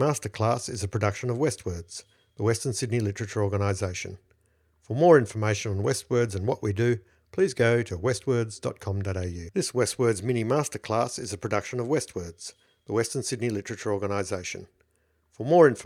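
No technical faults detected anywhere in the speech recording.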